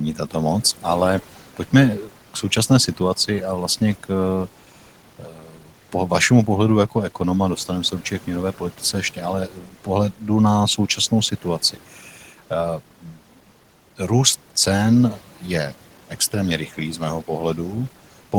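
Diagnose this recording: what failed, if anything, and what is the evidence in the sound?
The noise suppressor in call processing is cutting speech. At 2.05–3.0 s, 5.19–5.94 s (just before "vašemu pohledu jako ekonoma"), 8.58–10.23 s (just after "se určitě k měnové"), 10.78–12.51 s and 13.02–13.18 s, quiet stretches of speech dip by about 9 to 13 dB. The suppressor mistook them for the room noise, which sits about 20 dB below the speech. Unlike packet-loss gaps, the sound turns faint rather than silent, with no clicks or repeated fragments.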